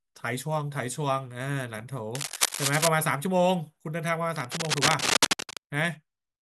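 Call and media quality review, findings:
Cable scratch noise, 2.15–2.88 s and 4.36–5.59 s. Dense, uneven scratching and rustling over the speech, roughly as loud as the speech itself. Probable component: a worn cable, connector or control being moved. Likely an unstable contact whose resistance fluctuates rapidly. Unlike isolated clicks or dropouts, the bursts are irregular and continuous while the part moves. Unlike handling thumps, they are crackly and broadband.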